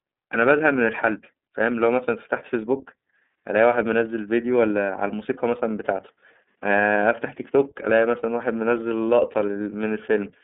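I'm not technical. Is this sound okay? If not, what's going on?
No. The iLBC codec, an internet-phone voice coder, shapes this speech from start to finish. It chops the sound into 30 ms slices and rebuilds each one separately from a compact description, so the voice comes out slightly rough and synthetic, and the damage is plainly audible. It also keeps only a narrow phone-line band, with nothing above about 3.8 kHz, which is why the speech sounds muffled and thin, like a call.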